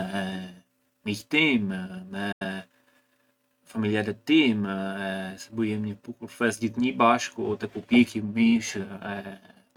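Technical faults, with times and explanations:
2.32 to 2.44 s, digital broadcast dropout: the speech fades out over 8 ms and is muted for 85 ms, which fits two lost or corrupted frames. The receiver silenced its output until valid frames resumed, so that stretch of programme is gone.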